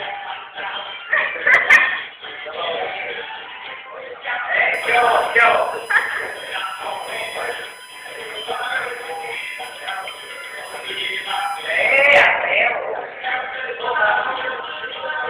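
From 4.74 s to 12.07 s a steady USB whine sits under the sound at 1 kHz. That's the bus's 1 ms frame timing leaking current through power or ground. It's a fixed-pitch tone, roughly 20 dB below the signal.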